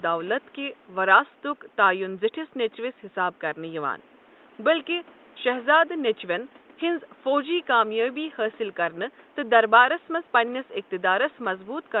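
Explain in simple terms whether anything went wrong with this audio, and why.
Nothing went wrong here: the speech arrives through the call connection as it should, with the faint room noise sitting far below it and the call's audio compression trimming the highest frequencies above roughly 12 kHz in the normal way.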